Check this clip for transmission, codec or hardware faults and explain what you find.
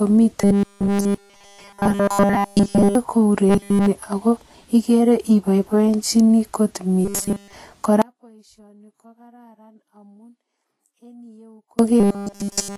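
Three kinds of fault are audible: coding damage throughout, a robotic buzz in four stretches, and one long dropout.

Vorbis compression damage is plainly audible across the whole clip. The treble sounds hissy and grainy. Consonant attacks are blurred. The likely cause is low-bitrate Vorbis coding, consistent with roughly 33 kbps. Fine high-frequency detail has been replaced by coarse, noise-like quantisation.

A robotic sound from repeated short buffers occurs at 0.41 to 2.95 s, 3.49 to 3.87 s, 7.05 to 7.53 s, and 12.00 s to the end. In each stretch, nearly all the audio is replaced by a rigid metallic buzz at 200 Hz. This likely comes from late audio being covered by repeating a 5 ms slice.

An audio dropout to a faint residue runs from 8.02 to 11.79 s, lasting about 3.8 s. The speech cuts out abruptly. Only a faint sound remains, about 30 dB below normal level. The likely cause is lost signal with the downstream path still live.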